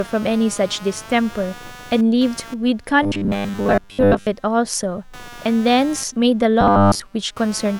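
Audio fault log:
throughout, computer activity noise: a scratchy buzz pulsing around 200 times a second, roughly 20 dB below the speech, from processor or graphics load disturbing the shared audio ground.
3.03–4.27 s and 6.61–7.02 s, robotic sound from repeated short buffers: speech becomes a rigid metallic 100 Hz buzz, likely from most audio being replaced by repeats of a 10 ms buffer.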